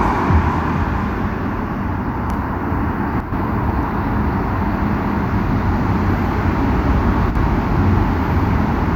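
At 3.20 to 3.32 s and again at 7.30 to 7.35 s the level suddenly dips by about 6 dB, then snaps back. That's most likely one channel dropping out: the mono sum briefly loses half its shared signal, plus anything only that side carried.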